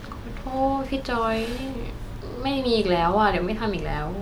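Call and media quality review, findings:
Nothing stood out on listening to the speech in this clip.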